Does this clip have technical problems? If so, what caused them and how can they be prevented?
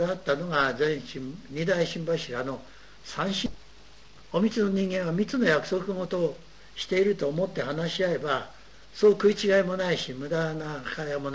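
Yes. At 3.46 s there is a skip ahead. About 0.7 s of sound was discarded, and playback jumps straight across with no gap. Preventing it means sizing the jitter buffer to absorb bursts without overflowing and dropping queued audio.

From 3.55 to 6.41 s there is a jitter buffer speed-up. Repeated pitch-period cuts remove roughly a third of a second, so the sound runs at 112% speed with unchanged pitch. Smoother packet delivery avoids the backlog, and slower, gentler catch-up keeps it less audible.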